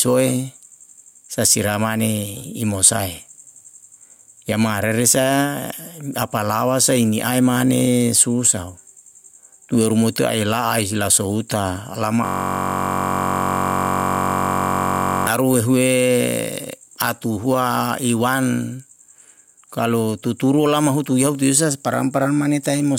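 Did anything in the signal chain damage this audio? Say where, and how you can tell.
Yes. Gain pumping runs throughout. The gain swings by around 10 dB, pulled down on each loud sound, likely from excessive input gain driving a fast limiter.

A system hang loop sits at the driver or buffer stage, from 12.25 to 15.27 s. A 21.33 ms slice repeats exactly, buzzing at 46.9 Hz, which fits a 1024-sample buffer replaying while the system froze.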